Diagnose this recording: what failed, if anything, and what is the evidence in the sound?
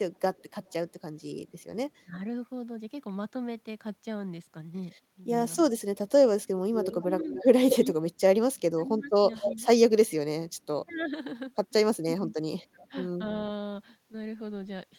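Echo leak, in call processing, at 0.35–0.72 s (faint, 249 ms behind), 6.74–7.9 s and 9.42–12.34 s (215 ms behind, at about 10 dB and then about 5 dB below the speech). The far end's echo canceller likely let loudspeaker pickup through and returned it.

Speech suppressed in double talk, also in call processing, at 2.04–2.15 s (a brief dip of around 15 dB) and 7.09–12.9 s (pieces totalling about two seconds, down by up to 25 dB). When both sides spoke, the canceller likely could not separate them and attenuated the talker.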